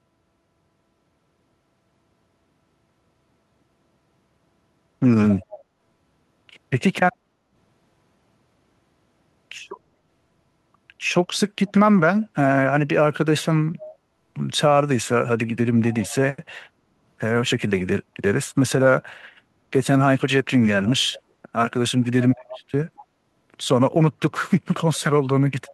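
A speech clip where faint copies of the voice trail about 0.23 s behind at 5.31, 7.12, 11.31, 13.81, 15.91, 20.85, 22.22 and 24.96 s, roughly 15 to 35 dB down. This echo leak likely comes from a far-end loudspeaker whose echo canceller passed residue back.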